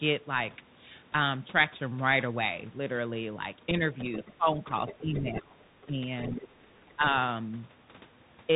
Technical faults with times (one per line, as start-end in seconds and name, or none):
0.00-8.56 Bluetooth CVSD headset codec
3.70-4.60 speech suppressed in double talk
3.99-4.33 other side's voice leaking through
4.66-5.40 other side's voice leaking through
4.85-6.00 speech suppressed in double talk
5.81-6.94 other side's voice leaking through
6.40-7.18 speech suppressed in double talk